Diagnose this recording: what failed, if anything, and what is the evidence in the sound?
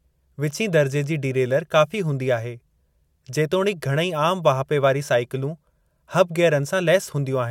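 Nothing failed in this recording, and the sound gives no evidence of a fault at any stage.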